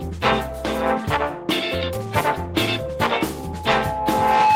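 At 3.30 s a loudspeaker feedback squeal begins. The microphone is hearing its own loudspeaker, and the loop gain passes one at 855 Hz, so that tone swells on its own and is still rising when the audio ends, finishing roughly 5 dB above the program sound. A spectrogram would show a bright, steady horizontal line at 855 Hz, and the waveform's envelope would visibly balloon.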